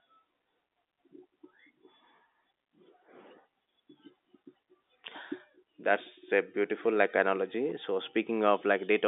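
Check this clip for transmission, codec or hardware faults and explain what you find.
The speech carries the ordinary narrow band of a G.711 telephone line, running from about 250 Hz to 3.7 kHz with nothing above 3.8 kHz, and nothing in the signal points to any fault.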